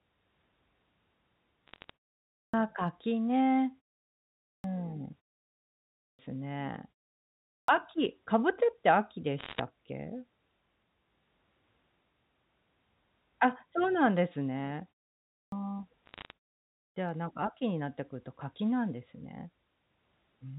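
At 1.68 to 1.90 s, bit errors on a digital phone line put a short burst of sharp ticks over the speech. The path fits G.711 mu-law telephone coding. Each flipped bit spoils one sample. When it lands on a sign or high-order bit, that sample jumps and clicks. The speech itself carries on unchanged beneath the crackle. The error rate here is low, a fraction of a percent.

At 2.22 s comes the first clipped start after a pause. About 0.31 s of sound is lost after a pause of roughly 0.3 s. The output device dozes in the gap and has to wake before it plays again. The speech snaps in without its opening. The same happens at 4.33 s, losing about 0.31 s after a 0.6 s pause. It happens again at 5.84 s, losing about 0.35 s after 0.7 s of pause, and at 7.36 s, losing about 0.32 s after 0.5 s.

Bit errors return at 9.38 to 9.60 s. This burst is denser, closer to one percent, so the ticking is busier.

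Another clipped start hits at 15.19 s. About 0.33 s goes after a 0.34 s pause.

A third patch of bit-error crackle runs from 16.06 to 16.31 s.

The last clipped start is at 16.61 s. About 0.35 s is cut after only a 0.3 s pause. Even short gaps let the device sleep.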